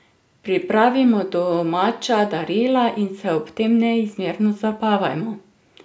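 Speech recording, no technical faults detected.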